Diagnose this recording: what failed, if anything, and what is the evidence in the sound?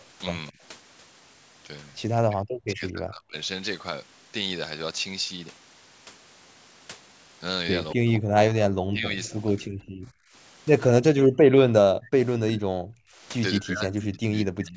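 The failure sits in the call processing stage. The echo canceller's double-talk handling likely could not separate the near talker from loudspeaker echo, so it turned everything down. This is speech suppressed in double talk. The speech dips or breaks up at 0.52–0.60 s (about 20 dB), 2.22–3.36 s, 7.95–9.09 s, 9.56–10.33 s, 11.01–13.21 s and 13.59 s to the end. The deepest cuts reach roughly 40 dB.

At 9.24–9.89 s an echo leak lets a faint delayed copy of the speech through, trailing it by 214 ms at about 30 dB below the main level. The echo canceller on the side playing the call on a loudspeaker likely left part of what its microphone picked up and sent it back. This overlaps the suppression that starts at 9.56 s. The call's microphone processing is also audible in the band limit, with nothing above 8 kHz.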